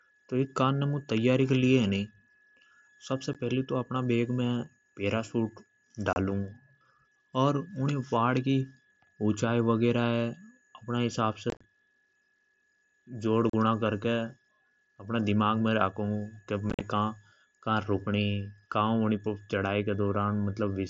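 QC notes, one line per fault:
3.33 s, 6.13–6.16 s, 11.50–11.64 s, 13.50–13.54 s, 16.70–16.81 s: unconcealed Bluetooth headset packet loss. Lost headset frames become silence or an idle pattern, leaving hard-edged gaps of 15 ms before "फेलि महारा बेग", 30 ms and 37.5 ms. At 11.50 and 16.70 s, scattered drops (82.5 ms over 135 ms, 75 ms over 105 ms) chop the speech into crackle.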